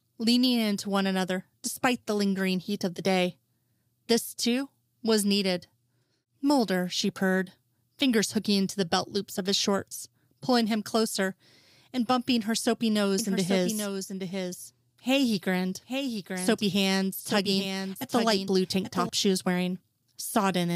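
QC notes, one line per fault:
13.19–19.09 s doubled audio track: a speech copy about 5 dB quieter trails about 0.7 s behind, likely a second capture path; unlike echo, it has no decay and starts and stops abruptly.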